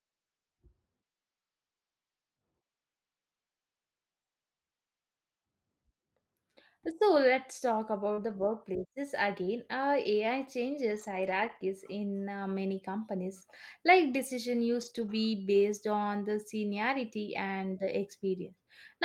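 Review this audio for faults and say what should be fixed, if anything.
Short concealed packet loss occurs at 8.13 to 8.19 s. About 40 ms of audio arrived too late to decode. The receiver extended the preceding sound to fill the gap, then blended back, leaving a brief smear. More jitter-buffer headroom would prevent it.

Lost packets rebuilt from error correction occur at 8.17 to 8.31 s, 10.91 to 11.61 s and 14.81 to 15.11 s. Roughly 80, 360 and 160 ms were replaced by low-bitrate Opus copies, so these stretches sound rougher and noisier. A more stable network path would prevent this.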